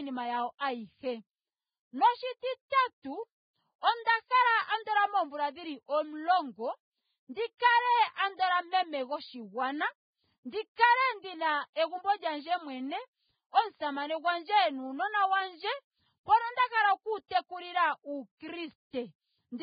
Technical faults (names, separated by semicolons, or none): Vorbis compression; pre-echo